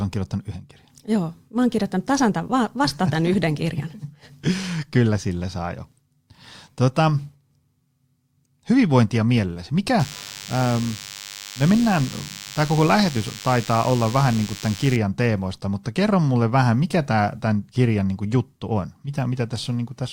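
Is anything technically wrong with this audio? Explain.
Yes. From 9.99 to 14.97 s, DECT cordless phone buzz sits under the speech, roughly 15 dB down. Radio bursts every 10 ms are rectified by the audio circuit, giving a thin, harsh 100 Hz buzz rich in harmonics, edgier than smooth 50 or 60 Hz mains hum.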